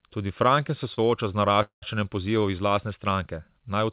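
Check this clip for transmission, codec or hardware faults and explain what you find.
Two delivery faults interrupt this speech clip, both heard over a band that stops at 4 kHz, consistent with a G.711 mu-law call path at 64 kbps.

A short stall from a late packet occurs at 0.94 to 0.99 s, just before "sooča z". A packet arrived after its playout time, so the jitter buffer ran dry and the receiver stretched the preceding sound for about 33 ms until the packet arrived. Playback then resumed where it had stopped, so nothing is lost, but that sound is held slightly too long with a faint buzzy smear, and everything after it runs about 33 ms later.

A call audio freeze follows at 1.62 to 1.84 s, right after "se sooča z". The sound stops advancing for about 195 ms and is bridged by a continuation that fades into roughly 120 ms of silence before the speech picks up exactly where it left off. No speech is missing, but a gap has been inserted and the rest of the clip lags by that amount. 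The likely cause is packets held up in transit, which left the jitter buffer empty for the whole wait.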